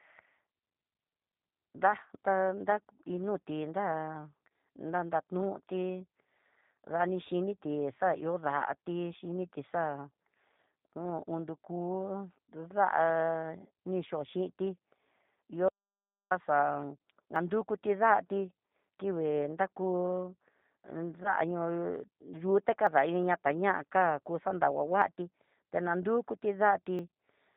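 The speech carries G.729 codec damage throughout, plainly audible as a rough, slightly synthetic quality consistent with 8 kbit/s coding. Each frame is rebuilt from a vocal tract filter, a pitch predictor and a few pulses, so a spectrogram shows nothing above 4 kHz and smeared harmonic detail.

At 17.36 s the sound jumps ahead. This is likely a dropped buffer (overrun), where the program read its samples too late, the hardware overwrote them, and roughly 20 ms vanished. The waveform shows an abrupt splice rather than a gap.

From 21.23 to 21.36 s, VoIP packet loss concealed by the speech codec turns the sound into a stretched, fading sound. About 20 ms went missing, which fits two lost 10 ms frames. The decoder extrapolated its last pitch and filter and then took time to recover. A spectrogram shows repeated, decaying harmonics, and the waveform envelope sags.

The same splices recur at 22.87, 25.02 and 26.99 s. 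They are likely dropped buffers of roughly 10, 20 and 10 ms, each a sudden skip with a visible discontinuity.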